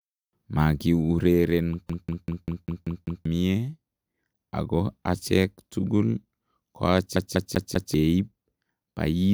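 From 1.89 s to 3.25 s the speech is caught by a CD stuck on one turn: a 0.2 s slice repeats seven times, each pass cut by a brief mute where the laser jumps back one track at the scratched spot. The same fault recurs from 7.16 s to 7.94 s with four repeats of a loop of the same length, producing the rapid, evenly spaced stutter typical of a skipping disc.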